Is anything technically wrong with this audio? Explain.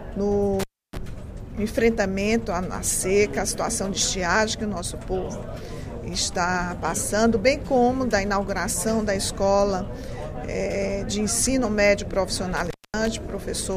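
Yes. An intermittent contact drops the signal twice, once from 0.60 to 0.97 s and again from 12.57 to 13.08 s. A loose plug or cable connection briefly loses contact, so the conductor path opens for about 0.30 s the first time and about 0.24 s the second. The sound cuts out abruptly with crackle at the edges where the contact scrapes open and closed, and a faint hiss remains under the gap until the signal returns.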